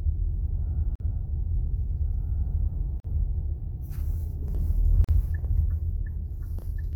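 Three brief dropouts cut into otherwise continuous sound: at 0.96 to 1.00 s (about 46 ms), 3.00 to 3.04 s and 5.04 to 5.09 s (about 43 ms each), recurring every 2 s. Each is a gap at a join of encoded pieces. The audio was encoded in 2-second segments and spliced without trimming, so each segment's end padding and start-up delay stay in, leaving a short hole with softened edges before the sound resumes.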